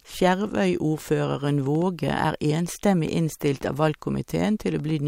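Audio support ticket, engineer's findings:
Train of clicks, 1.49 to 4.91 s. Likely cause: interference from nearby equipment or a faulty connection or power supply, injecting short pulses into the chain at an uneven pace, about 3.5 per second. Result: around fifteen similar-shaped ticks over the speech and through its pauses, irregularly spaced, peaking at roughly the same level as the speech itself.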